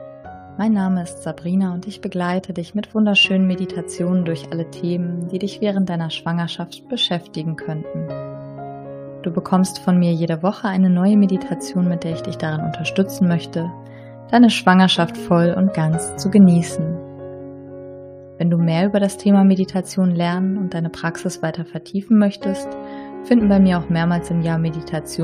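Right near the end, around 23.40 to 23.42 s, there's a case of compressed frames skipped. Frames of the encoded stream never got played, either because they weren't in the file or the decoder rejected them as corrupt, so the audio leaps forward by roughly 50 ms. It's a moment where a sliver of the sound just vanishes.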